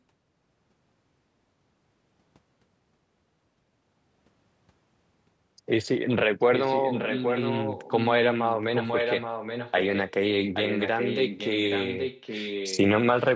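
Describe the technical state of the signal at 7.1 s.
At 7.1 s an echo leak is under way, spanning 6.54 to 8.55 s. The speech returns 825 ms late and about 5 dB quieter, likely because a loudspeaker-side echo canceller let its pickup through. A spectrogram shows harmonic patterns of one voice repeated 0.83 s later, with overlapping waveform envelopes.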